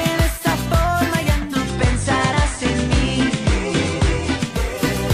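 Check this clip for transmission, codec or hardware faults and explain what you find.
One fault: digital radio blending to analogue, from 1.30 s to 4.80 s. The receiver loses the digital stream and cross-fades over about 456 ms to the station's FM broadcast, then fades back at 4.80 s. While on FM, a faint hiss appears, roughly 35 dB below the signal. Loudness does not step at either transition.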